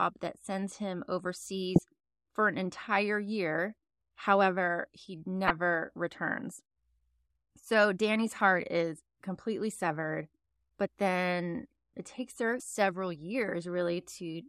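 DAB burbling at 1.76 to 1.80 s and 5.45 to 5.50 s: residual bit errors corrupt MP2 sub-band data, producing brief blips of noise in single sub-bands over the speech.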